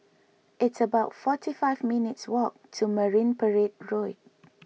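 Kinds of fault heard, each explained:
No kinds of fault are heard in this clip.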